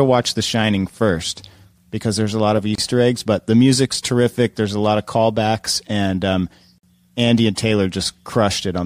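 The speech drops into brief silences at 2.75 to 2.78 s (about 30 ms) and 6.78 to 6.83 s (about 49 ms), then resumes where it stopped. These are gaps at joins of encoded pieces, four seconds apart, where untrimmed encoder delay and end-frame padding remain.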